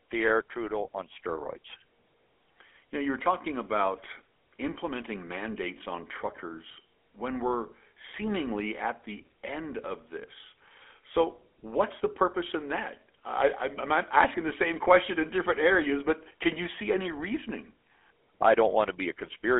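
GSM full-rate codec damage runs throughout. The speech is confined to a telephone band of 250 Hz to 3.4 kHz and carries a plainly audible buzzy, gravelly roughness, because the codec rebuilds the vocal tract from sparse, evenly spaced excitation pulses, which fits a 13 kbps stream.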